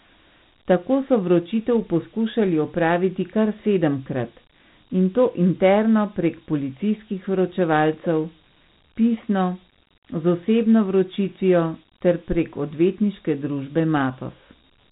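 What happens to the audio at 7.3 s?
At 7.3 s the speech carries the same Dialogic VOX ADPCM coding heard across the entire clip. Each sample is stored as a 4-bit step relative to a prediction, so the coarse quantisation shows up as a gritty hiss that rides on the speech and is plainly audible. Nothing reaches above about 3.9 kHz, which fits the 8,000-sample-per-second rate of a 32 kbps VOX stream, giving the muffled telephone-band sound.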